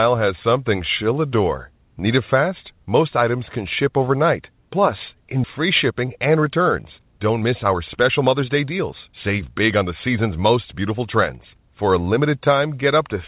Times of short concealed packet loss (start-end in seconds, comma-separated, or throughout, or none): none